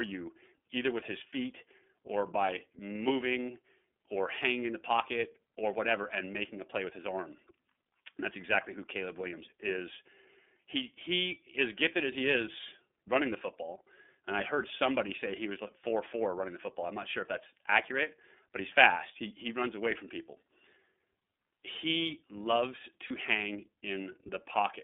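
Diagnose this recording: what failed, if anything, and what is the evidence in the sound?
The whole recording runs through the iLBC codec at the codec stage, band-limited to about 200 Hz to 3.5 kHz. The speech sounds slightly rough and synthetic. On a spectrogram, energy stops sharply near 3.5 kHz, and the coarse per-frame excitation coding, which fits 30 ms frames at around 13.3 kbps, leaves a grainy texture.

At 23.07 to 23.11 s a network fault leaves lost iLBC frames. About 30 ms of audio, consistent with one lost packet, is replaced by a repeated pitch cycle mixed with noise, heard as a brief buzzy held vowel. The waveform shows repeating periodic cycles, and normal speech returns immediately afterward.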